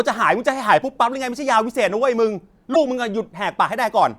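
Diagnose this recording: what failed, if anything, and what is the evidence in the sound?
Codec: speech skips ahead at 2.73–2.76 s, likely a broken MP3 bit reservoir reading another frame's bytes.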